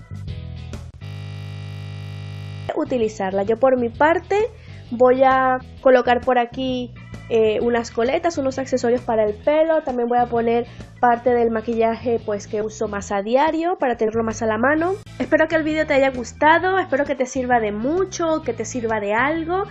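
From 1.05 to 2.69 s there's a system hang loop: the system froze while the hardware kept replaying one 20 ms buffer, so you get a steady 50 Hz buzz. Then we have compressed frames skipped at 12.61 s and again from 14.07 to 14.10 s. Each time a few frames, roughly 70 ms of audio, go missing, which fits 20 ms frames, and the audio jumps ahead.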